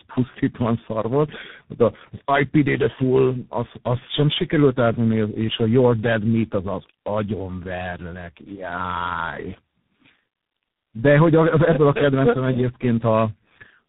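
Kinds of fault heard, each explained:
Tandem speech coding: throughout the clip the speech has the layered roughness of a call that crossed several networks, each re-encoding it with its own speech codec. The sound points to three low-rate coders in a row, likely AMR-NB, G.723.1 and G.726, joined by ordinary 64 kbit/s telephone links. Each coder reworks the previous one's damage, so the voice sounds grainy, muffled and warbly, with nothing above about 3.8 kHz.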